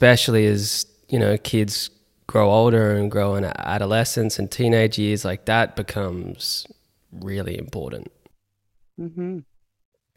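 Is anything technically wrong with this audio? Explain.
No, nothing technically wrong can be heard in this speech recording. There is nothing in it to single out as a technical problem.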